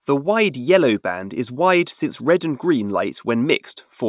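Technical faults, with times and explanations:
No technical faults detected in this speech recording.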